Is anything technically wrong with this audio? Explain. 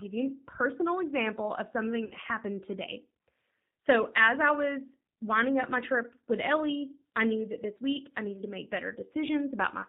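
Yes, two faults. Throughout, the speech sounds slightly rough and synthetic, with nothing above 4 kHz. This is the G.729 codec, rebuilding speech from a filter, pitch predictor and sparse pulses, which fits 8 kbit/s coding.

From 2.05 to 2.14 s, the speech stretches and fades, and stays weak briefly afterwards. This is VoIP packet loss concealed by the speech codec, covering about 60 ms of missing audio by extrapolating from the last frames.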